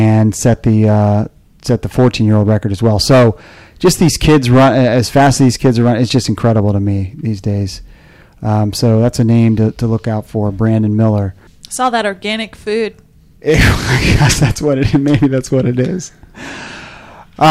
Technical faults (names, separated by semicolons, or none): hard clipping